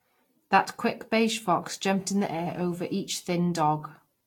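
Throughout, the speech sounds swirly, smeared and hollow, with blurred attacks and nothing above 19.1 kHz, likely generation loss from about five Vorbis re-encodes near 70 kbit/s. Just after "quick beige fox", from 1.97 to 2.95 s, a steady, raspy GSM phone buzz at 217 Hz sits about 32 dB down, from rectified bursts of a phone in a call.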